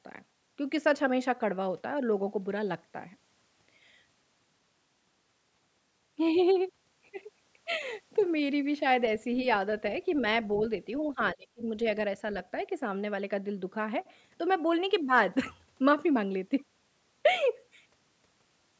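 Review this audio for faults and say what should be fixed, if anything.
From 11.34 to 11.66 s the speech gets clamped hard for roughly a third of a second, dropping by something like 30 dB at its deepest, so it nearly vanishes before recovering. That's speech suppressed in double talk, most likely: the echo canceller seems to have heard far-end audio over this talker, couldn't tell the local voice from loudspeaker echo, and ducked everything together. To prevent it, use an echo canceller with proper double-talk detection, or a headset so there's little echo to fight.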